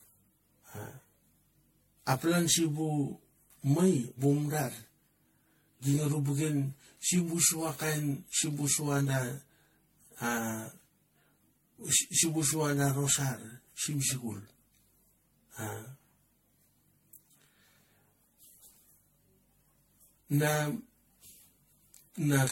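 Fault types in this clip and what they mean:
Channel delay (comb filtering): one channel lags the other by roughly 20 ms, so the mono sum has evenly spaced notches from about 20 Hz upward, giving a rough, slightly doubled speech tone.
Generation loss: smeared, swirly speech with blurred attacks and nothing above 16.5 kHz, likely from about seven rounds of MP3 encoding at a rate that fits 64 kbit/s.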